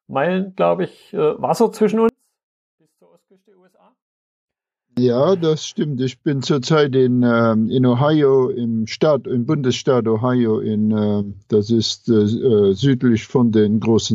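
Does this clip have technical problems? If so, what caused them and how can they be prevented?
Yes. From 2.09 to 4.97 s, one stereo channel was likely inverted in polarity, a one channel inverted fault. When the two channels are combined to mono, everything they share cancels, and the level drops by about 36 dB. The centred, shared part of the sound, including its low end, all but disappears, leaving only a faint residue of whatever differs between left and right. Prevent it by checking polarity and mono compatibility on every stereo path before summing or distributing.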